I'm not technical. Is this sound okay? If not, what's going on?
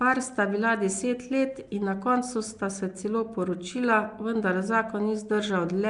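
No. Nellymoser compression is audible from start to finish. The speech has a rough, hissy fuzz around it and a smeared, underwater quality, and nothing above about 10.6 kHz survives, so it sounds dull at the top. The likely cause is the old Flash microphone codec, Nellymoser Asao. It squeezes sound into short chunks with very little data, gives the quietest parts of each chunk nothing, and fills those gaps with noise, which produces that hiss.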